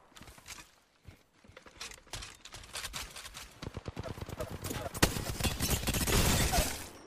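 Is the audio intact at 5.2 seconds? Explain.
No. A doubled audio track runs from 1.48 s to 5.30 s, so 5.2 s falls inside it. A second full-band copy of the sound trails the original by roughly 0.4 s and sits about 5 dB quieter, likely because the signal was captured again by a slower path or held twice out of step by an edit. It sounds like a dry, colourless echo with no decay, and it cuts off abruptly at 5.30 s.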